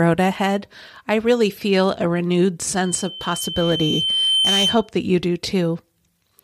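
At 2.85 s, after "really feel a renewed", loudspeaker feedback squeal swells at 3.1 kHz. The microphone hears its own loudspeaker, so the loop runs away. It stops at 4.91 s, before "that you do".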